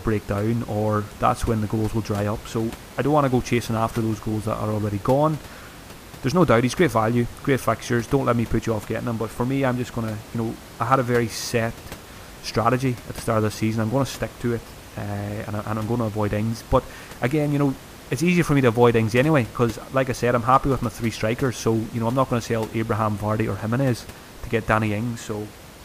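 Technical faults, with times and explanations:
Nothing stood out on listening to this speech recording.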